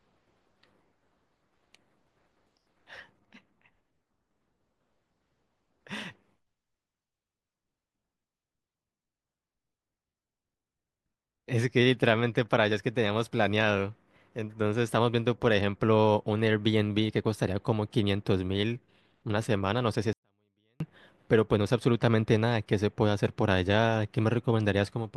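A speech clip with a 24-bit alignment error that makes one short stretch far too quiet. From 20.13 s to 20.80 s the level falls by about 48 dB at once, to near silence, then returns. The sound in that gap stays clean, not distorted. That points to 24-bit samples sitting in the low bytes of 32-bit words being read as full 32-bit integers. Each value lands eight bits too low, shrinking the signal 256-fold.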